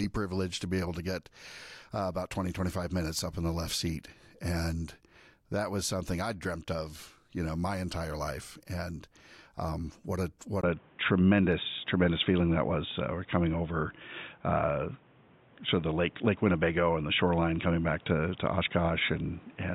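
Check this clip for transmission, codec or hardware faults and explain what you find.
One fault is present. After a 20 ms gap at 10.61 s, following "um what a what", the speech turns dull and boxy to the end, with nothing above 3.8 kHz, a level shift of about 5 dB and new background noise about 30 dB below the speech. The likely cause is the input switched to a poorer device with a narrower band.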